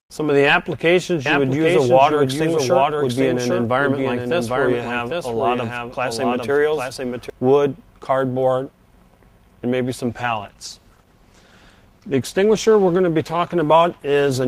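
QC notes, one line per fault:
1.26–7.30 s, doubled audio track: a full-band copy, roughly 5 dB quieter, trails the sound by about 0.7 s, with no decay or room colour. It likely comes from a second, slower capture path. The waveform shows repeated shapes offset in time, starting and stopping abruptly.
10.08 s to the end, call bitrate drop: for the last 4.4 s the sound turns rough and muffled as the encoder codes more coarsely. This fits a fall from about 48 to 14 kbps. On a spectrogram the high frequencies are cut off flat, with smeared, blocky detail below.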